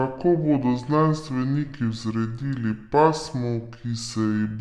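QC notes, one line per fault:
Throughout, wrong sample rate: the speech runs at about two-thirds speed and sits roughly 7 semitones low, sounding slow and deep, because the samples are clocked out slower than they were captured, which fits 48 kHz material played back at 32 kHz without conversion.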